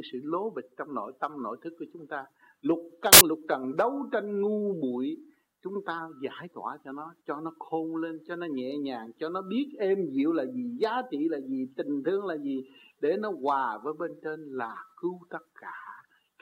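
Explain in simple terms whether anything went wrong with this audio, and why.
For a brief moment the player read the audio data wrongly: samples built from the wrong bytes. Each sample is stored as a few bytes, and here they were put back together in the wrong order or shifted by one, so the tiny, rapidly changing details ended up as the biggest part of the signal. The result is a sudden burst of loud hiss, like static, from 3.13 to 3.21 seconds, lasting less than a tenth of a second.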